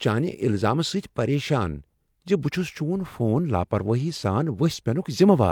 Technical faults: none

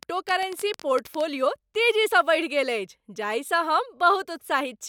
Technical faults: train of clicks

